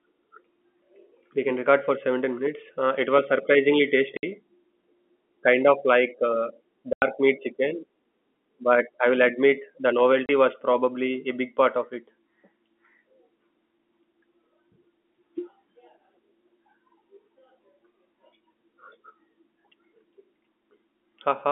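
At 4.17 s the speech drops into dead silence for 60 ms, again at 6.93 s for 90 ms, and at 10.26 s for 30 ms. This is packet loss filled with silence. Missing packets were replaced with nothing, so each gap is a multiple of one length, which fits a 30 ms packet. Unlike concealment, which smears or repeats sound across the hole, these gaps are truly empty and start and stop with hard edges. The narrow telephone band of the G.711 line stays the same through them.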